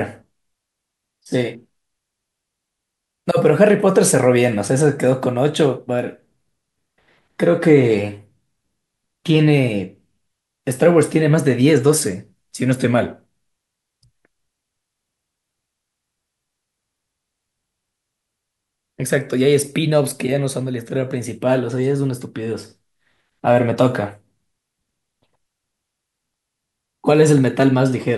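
No technical faults turn up anywhere in this speech recording. The sound holds steady at every point, with nothing that interrupts or alters it.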